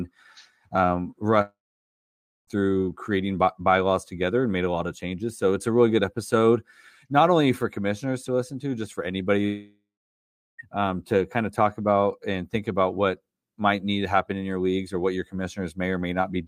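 Long network dropouts at 1.41 to 2.49 s and 9.45 to 10.60 s, the first ending just before "through creating", the second following "to just for anybody" and ending before "um to kind of". The speech stops and the last sound trails into a brief fading buzz, then about 0.9 s and 0.7 s of near-silence. This likely comes from incoming audio ceasing, so the receiver concealed the gap before resuming with roughly a second of speech lost each time.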